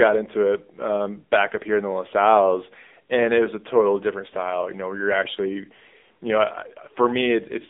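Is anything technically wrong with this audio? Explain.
Yes. The speech carries AMR narrowband mobile codec damage from start to finish. The whole clip passes through a phone-style line of roughly 250 Hz to 3.6 kHz, and nothing above 3.8 kHz survives. The codec rebuilds the voice from a vocal-tract model excited by a few pulses per short sub-frame. Its damage is plainly audible, with a buzzy, synthetic edge, at a mid-rate AMR-NB mode of around 7.95 kbps. The voice sounds thin and boxy, with no air or sibilant sparkle.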